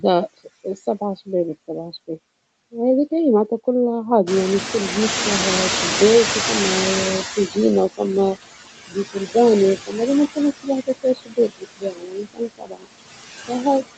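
Noise suppressor artifacts run through the whole clip. Background noise is pushed down by about 18 dB, then swells under speech.

From 4.26 to 7.64 s, the noise suppressor is catching up. Room noise jumps by about 21 dB near 4.5 s. The suppressor's estimate lags, so the noise comes through with less reduction before sinking by about 14 dB.

Speech is cut by the noise suppressor at 9.13 to 9.35 s and 9.76 to 9.95 s, with drops of about 18 and 17 dB. Each loss lasts only a fraction of a second, so short sounds go faint. From 10.87 to 12.87 s, the deepest drop reaches about 22 dB, and roughly a second of speech sounds swallowed.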